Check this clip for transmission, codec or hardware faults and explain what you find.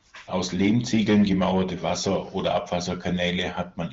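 I find no faults in the clip.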